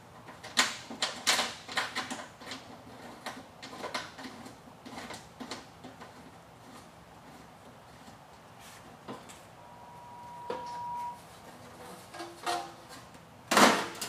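Loudspeaker feedback squeal from 9.57 to 11.32 s: a 963 Hz tone swells over about a second and a half to roughly programme level as loop gain exceeds unity.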